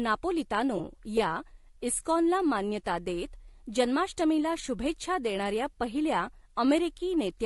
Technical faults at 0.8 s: low-delay AAC compression; AAC frame loss with concealment

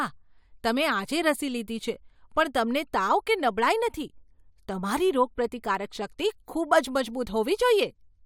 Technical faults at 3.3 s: none

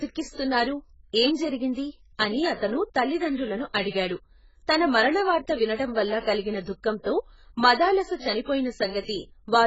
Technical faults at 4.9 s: AAC compression

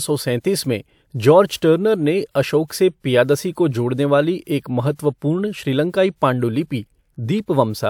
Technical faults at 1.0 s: none

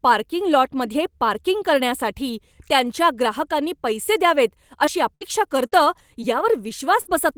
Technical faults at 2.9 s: lost packet rebuilt from error correction

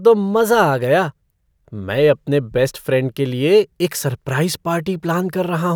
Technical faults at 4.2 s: none

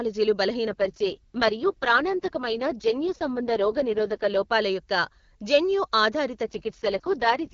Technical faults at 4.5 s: AMR rate drop

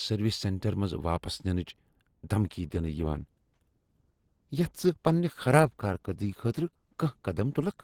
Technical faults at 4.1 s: adaptive stream at a lower bitrate

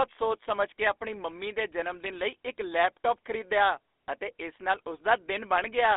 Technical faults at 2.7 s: GSM full-rate codec

